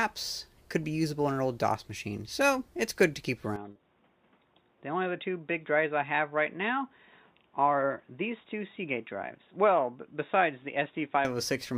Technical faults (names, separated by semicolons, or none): input switched to a poorer device; short concealed packet loss